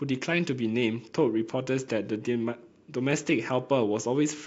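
Two devices in the chain were likely running on separate, unsynchronised clocks drifting apart by a few hundred parts per million, so a single sample gets dropped or repeated each time the error adds up to one whole sample. From 0.13 s to 4.44 s this produces clock slip clicks roughly every 70 ms, some seventy in all, a faint regular ticking that merges into a soft rattle under the speech and drops out when the sound falls silent.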